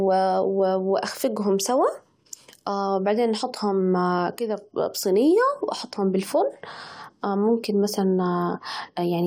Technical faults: none

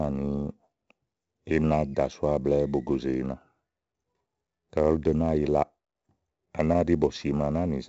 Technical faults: 4-bit ADPCM compression

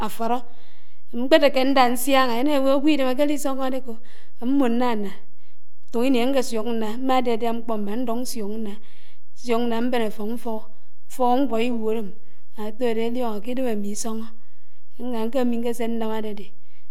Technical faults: DC offset

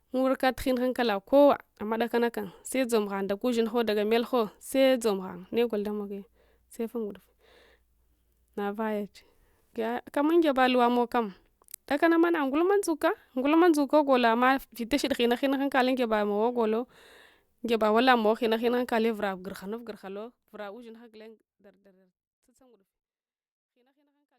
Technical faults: none

